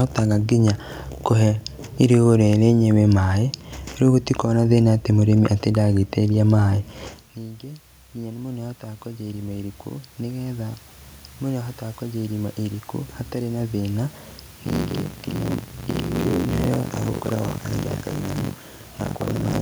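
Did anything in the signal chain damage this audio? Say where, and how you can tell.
Yes. Two problems came from the chain itself. Around 7.0 s the talker moves away, dropping the level at the microphone by about 18 dB. That drop is natural, but what follows is automatic gain rising in the call processing. From 7.6 to 10.84 s the gain climbs by about 6 dB, and from 11.41 to 14.18 s by another 5 dB. Speech and room noise swell together. On a waveform the envelope ramps up slowly, and on a spectrogram the noise floor brightens along with the voice.

From 14.64 s to the end there is buffer tearing at the driver or buffer stage. Speech gains a robotic buzz at 46.9 Hz that is present only while there is signal. That rate fits a 1024-sample buffer. The write and read positions have slipped, so a bit under half of each period replays audio from about 70 ms earlier, with hard joins. A spectrogram shows regularly spaced vertical seams through the speech, and the waveform shows abrupt discontinuities at those same boundaries.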